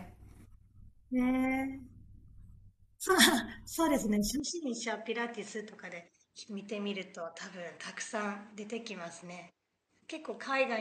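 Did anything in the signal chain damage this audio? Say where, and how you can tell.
Yes. From 4.4 s to the end, the speech loses everything above 8.5 kHz and drops about 5 dB, with a new noise floor about 50 dB down and no gap at the change. The input was likely switched to a poorer device at the driver level.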